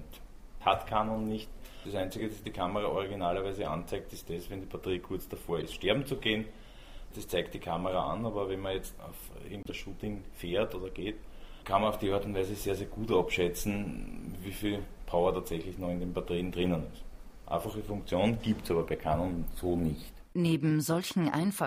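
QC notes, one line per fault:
2.19–2.21 s, corrupt frame decoded: a short chirp of misplaced energy, peaking near about -20 dBFS. Damaged bits in a couple of frames were decoded as sound.
5.60–5.63 s, corrupt frame decoded: a brief squeak near about -25 dBFS. A few damaged frames put energy at the wrong frequencies.
9.63–9.69 s, corrupt frame decoded: a quieter blip near about -35 dBFS, lasting a few frames. Misread codes produced stray spectral energy.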